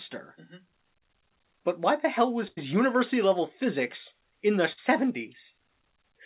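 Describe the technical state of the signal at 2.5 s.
At 2.5 s the speech briefly stalls: from about 2.48 to 2.59 s the last sound before the gap is stretched out and fades down, and when the audio picks up again a slice of speech has simply gone. This is a burst of packet loss. Roughly 100 ms of audio never arrived in time, and the receiver filled about 93 ms of it by continuing and attenuating what it last had, within the narrowband G.711-style call audio that carries nothing above 4 kHz.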